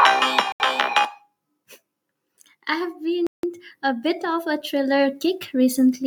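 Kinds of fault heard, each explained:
Bluetooth stall: The speech drops to dead silence twice and then carries on. The first gap is 79 ms at 0.52 s. The second is 167 ms at 3.27 s, between "I have" and "a bit of a". Both gaps are clean holes rather than crackle or distortion. The likely cause is interference on the wireless link delaying packets, so the headphones' buffer ran empty and playback paused until the resent audio arrived.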